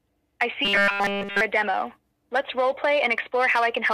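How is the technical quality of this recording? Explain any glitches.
The recording has one glitch. Robotic sound from repeated short buffers runs from 0.65 to 1.41 s. It is likely caused by audio arriving too slowly, so essentially every segment is filled by looping about 5 ms of sound. That forces a rigid, metallic 200 Hz buzz while the real audio is skipped.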